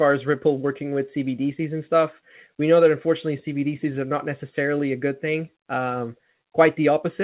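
Listening to this speech recording, nothing stood out as a technical problem, and the narrow telephone-style bandwidth, with nothing above 4 kHz, is simply what the G.711 mu-law call path delivers.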